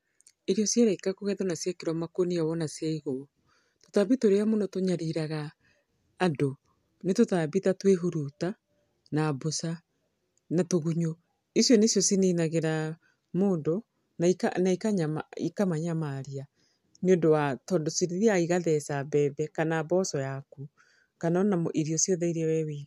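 Nothing stood out as a technical fault on listening to this speech recording.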